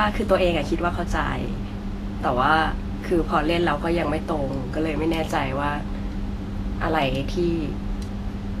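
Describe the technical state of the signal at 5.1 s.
At 5.1 s, as throughout the clip, the speech sounds hissy and grainy, with blurred onsets and nothing above 14.2 kHz. This is likely Vorbis compression at a low bitrate near 35 kbps, turning treble detail into noise. A spectrogram shows a flat ceiling and speckled highs.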